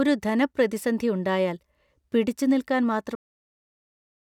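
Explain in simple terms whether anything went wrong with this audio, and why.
A cut-off end at 3.15 s: the speech stops abruptly in the middle of a sound and falls straight into dead digital silence for the rest of the clip. There is no natural fade or trailing off. This happens when the final chunks of audio were never written to the file or sent to the speakers, so the recording ends partway through a sound instead of being allowed to finish.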